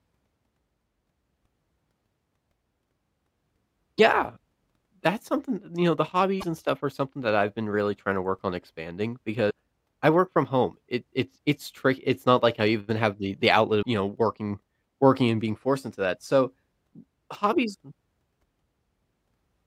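Five short bursts of damaged data in the compressed stream interrupt the speech, at 3.95–4.00 s, 6.37–6.44 s (between "know the" and "and stuff are something"), 9.47–9.51 s (after "to work on expanding"), 13.79–13.86 s (after "have the the outlet") and 17.32–17.37 s. Each lasts roughly 40–70 ms. Corrupted bytes make the decoder misread frames and resynchronise on the next header, producing a brief chirp or squawk.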